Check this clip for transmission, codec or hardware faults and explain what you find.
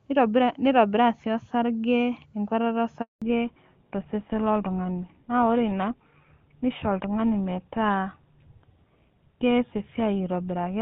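Two linked transmission faults appear at about 3 seconds: a handover gap followed by a fallback to narrowband.

Handover gap, 3.02 to 3.22 s: while the call was passed between networks, no speech frames arrived for 200 ms. The speech fades out within a few tens of milliseconds and stays silent until the new link carries audio again, so whatever was said during that interval is lost.

Fallback to narrowband, 3.22 s to the end: after the handover the call no longer runs at HD Voice quality. Before the gap, the AMR wideband (HD Voice) codec at 23.85 kbit/s carries the full upper band. From 3.22 s the audio is cut off above 4 kHz. That points to an older narrowband codec, consistent with GSM full rate at 13 kbit/s. The speech sounds duller and rougher than in the first three seconds.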